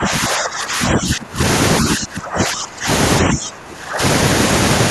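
Speech sinks by up to about 20 dB and fades in and out from 0.0 to 1.41 s, 1.81 to 2.88 s and 3.22 to 4.02 s. This is likely speech suppressed in double talk: with both ends talking at once, the echo canceller turned the near voice down along with the echo.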